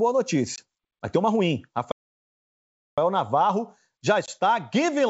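At 0.56 and again at 4.26 s there's packet loss on the ADPCM call: a hard 20 ms hole, about one packet, then slightly distorted speech for some tens of milliseconds while the decoder's predictor and step size resync with the sender. Between 1.92 and 2.98 s, right after "tem uma ruim", there's a playback stall, roughly a second of dead silence, likely from the player running dry, before the speech picks up again.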